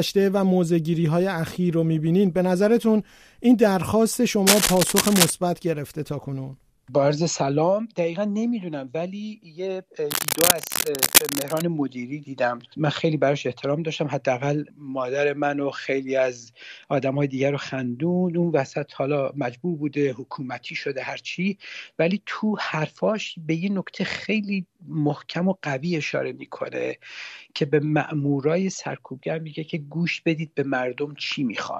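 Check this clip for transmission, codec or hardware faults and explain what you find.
Two bursts of cable scratch noise, at 4.47 to 5.30 s and 10.10 to 11.62 s, most likely from a worn cable or connector shifting and rapidly varying its contact resistance. The result is dense, ragged scratching about as loud as the sound itself.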